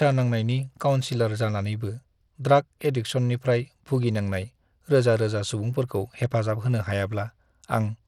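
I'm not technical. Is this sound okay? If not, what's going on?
No, it's not. All the way through, the speech sounds gritty and the high end flickers in and out, likely from Bluetooth SBC compression squeezing it too hard.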